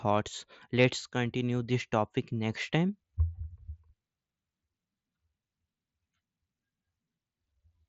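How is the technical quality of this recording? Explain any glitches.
No glitches turn up here; the speech comes across the way a Bluetooth headset on the mSBC codec normally sounds, topping out around 7.7 kHz with only the light graininess that codec leaves behind.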